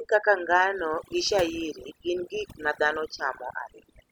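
From start to finish the speech carries overdone noise removal: a noise reduction stage set far too aggressively has pulled individual frequency bands down toward silence wherever they sat close to its noise estimate, taking the softer parts of the voice along with them. The background is left near-silent but flecked with twinkling specks. Unlike a noise gate, which opens and shuts the whole signal at once, the losses here flicker band by band within a single moment.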